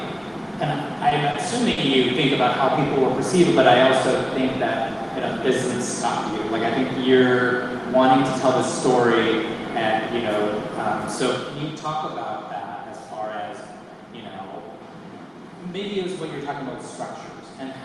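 At 1.09 s the sound briefly stalls from a late packet. The packet did not arrive in time, so the jitter buffer emptied and the receiver held the last sound for about 20 ms. Playback then resumed where it left off. At 1.31 s a second stall holds for about 30 ms. At 1.72 s a third lasts about 50 ms. Nothing is lost. Each spot sounds briefly frozen, with a faint buzz or dip, and every stall pushes playback a little later.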